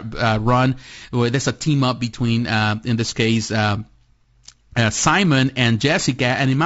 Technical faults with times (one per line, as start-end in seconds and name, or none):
0.00-6.65 low-delay AAC compression